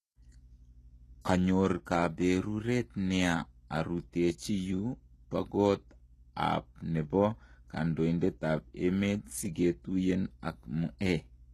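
Throughout the speech, the encoder has likely used HE-AAC compression at a very low rate, one that fits a bitrate around 16 kbps. It keeps only the lower spectrum and rebuilds the treble from copied, coarsely shaped low bands. Nothing remains above 12.4 kHz, and the synthetic top end doesn't line up with the real harmonics beneath it. The damage is plainly audible: s sounds come out gritty and lispy, with a metallic sheen over the brightness.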